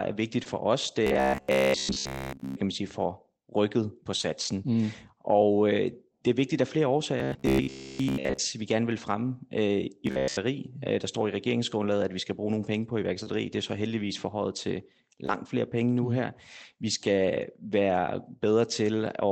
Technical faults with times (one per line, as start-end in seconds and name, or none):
0.43-0.47 short concealed packet loss
1.07-2.56 robotic sound from repeated short buffers
4.21-4.25 short concealed packet loss
7.20-8.38 robotic sound from repeated short buffers
10.07-10.37 robotic sound from repeated short buffers
13.23-13.28 short concealed packet loss
15.26-15.45 short concealed packet loss